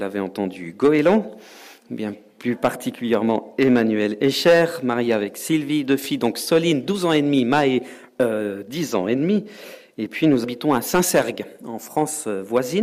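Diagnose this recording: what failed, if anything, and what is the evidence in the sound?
Hard clipping throughout: the level is driven about 10 dB past what the converter or number format holds, so roughly one percent of samples flatten into crackle.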